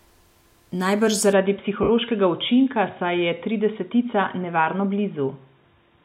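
At 1.33 s the speech abruptly loses everything above 3.8 kHz and stays band-limited to the end, with no gap and no jump in level. A faint new background noise, far below the speech, arrives with it. This points to an input switched to a poorer device, likely a fallback microphone or a headset call profile. Unlike a lowpass filter or codec bandwidth change, the cutoff arrives together with a different noise floor and a changed tonal colour.

From 1.83 to 1.89 s, about 60 ms, the sound dissolves into a noisy, hissy smear that loses its pitch and decays rather than cutting out. This is lost LE Audio frames, consistent with six 10 ms frames dropped. The LC3 decoder kept reusing the last spectrum with randomised signs and faded it. That smeared decay sets it apart from a plain dropout, which goes to silence, or from a packet-loss repeat, which would stutter audibly.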